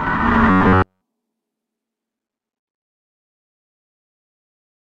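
From 0.50 to 1.02 s the sound turns into a rigid, metallic buzz at 93.8 Hz. This robotic sound most likely comes from repeated short buffers of about 11 ms.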